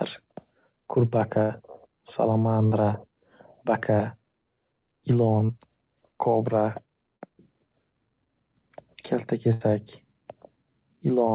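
A burst of packet loss hits at 1.42 to 1.52 s: about 80 ms of consecutive packets never arrived in time, so the receiver stretched the last received sound across the hole, letting it decay. A held buzz or fading hiss stands in for the missing speech before it resumes past the lost stretch. The same happens at 2.66 to 2.74 s, with about 60 ms gone, and again at 9.53 to 9.63 s, where about 80 ms drops out.

Between those, short concealed packet loss appears twice. At 5.46 to 5.51 s and at 7.17 to 7.23 s, roughly 40 ms failed to reach the decoder, and the receiver patched each gap by extending the preceding sound before crossfading into the real audio. Each patch is brief, a momentary smear or wobble rather than an audible hole.

The speech carries the band limit of the call path, with nothing above 4 kHz, which fits G.711 A-law at 64 kbps.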